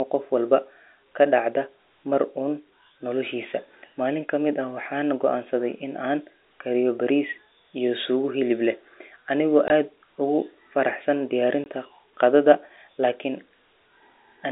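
At 9.68 s and again at 11.64 s, a single 20 ms stretch of the speech never arrived and the receiver filled each gap with silence, which fits one lost packet each time. This is packet loss filled with silence: two brief hard-edged dropouts cut into the narrow G.711 telephone band.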